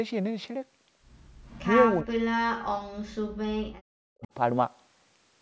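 From 1.43 to 1.64 s, an echo leak returns a faint copy of the speech about 415 ms late and about 20 dB down, likely from a far-end loudspeaker the echo canceller did not fully cancel. Speech suppressed in double talk follows at 2.03–2.6 s and 2.79–4.29 s: the talker's level collapses by roughly 40 dB in pieces, likely because the canceller mistook overlapping speech for echo. A brief second echo leak at 4.23–4.28 s arrives about 432 ms late and about 30 dB down.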